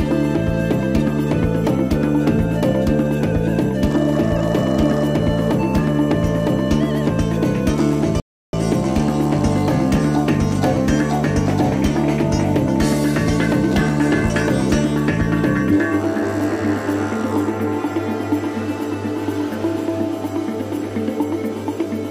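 At 8.2 s the audio cuts to silence mid-flow and resumes at 8.53 s, a gap of about 330 ms. This is a playback stall: the player likely ran short of buffered data or had its output thread blocked, so nothing reached the output until it recovered.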